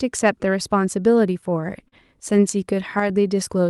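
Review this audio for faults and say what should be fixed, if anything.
Between 1.41 and 2.40 s the speech catches and drags in eight short hitches, each briefly smearing the preceding sound rather than dropping anything. These are repeated stalls (stutter): packets arrived later or slower than playback consumed them, so the jitter buffer kept running dry and the receiver extended the last sound to bridge each gap. The longest hold lasts 37 ms, and about 100 ms is filled in total, roughly a tenth of that stretch, with no audio lost. Prevention: give the jitter buffer more headroom or stabilise packet delivery so the reserve never empties.

From 3.00 to 3.10 s the level of the speech and the background noise drops together, abruptly, by about 6 dB, with no fade. This sudden gain jump most likely comes from a digital gain change applied from one sample to the next, such as a setting or bit shift switched in without a ramp, since speech and noise move as one. 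Prevention: apply every gain change through a short ramp of a few milliseconds instead of a single-sample step.

From 3.27 to 3.69 s the speech slows to about 92% of its normal pace while the pitch stays the same, so sounds are slightly stretched. This is a jitter buffer slow-down: with its reserve low, the receiver rebuilt its cushion by repeating single pitch periods and slivers of pause, adding about 38 ms over the span. Prevention: keep the buffer target steady and adequately sized so it doesn't have to stretch audio to refill.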